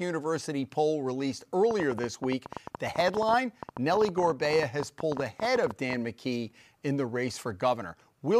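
From 1.71 s to 5.94 s, just after "poll released", a train of clicks ticks over the speech at about 13.5 per second, unevenly spaced. Some fifty clicks stand out. Interference is the likely cause.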